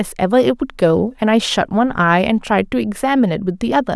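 Speech recording with no audible technical faults.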